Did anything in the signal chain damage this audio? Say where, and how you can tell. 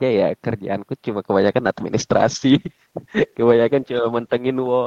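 Yes: a call bitrate drop at the network stage from 1.61 s to the end cuts the codec from 48 to 17 kbps, leaving speech coarse and muffled, with the rate at its lowest for about 1.9 s.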